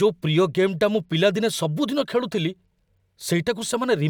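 Listening through the speech, nothing stood out as a technical fault at any point.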